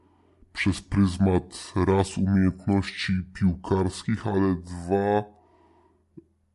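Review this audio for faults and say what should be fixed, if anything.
The whole clip has a wrong sample rate fault. The speech runs at about two-thirds speed and sits roughly 7 semitones low, which fits 48 kHz material being played back at 32 kHz with no conversion, so tempo and pitch drop together. To prevent it, tag files with their true rate and resample whenever playback runs at a different one.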